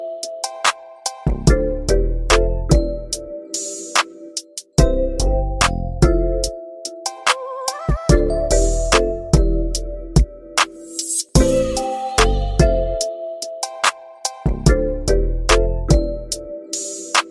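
Nothing in the clip stands out as a technical problem, so there's nothing to flag here.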